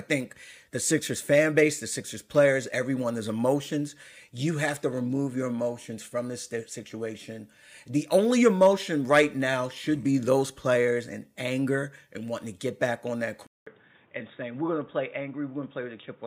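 At 13.47 s the sound drops out for 200 ms, then returns duller, about 5 dB quieter, with nothing above 3.8 kHz and a different faint background noise until the end. This is likely an input switched to a poorer device. The gap and the changed noise floor set it apart from a simple low-pass filter.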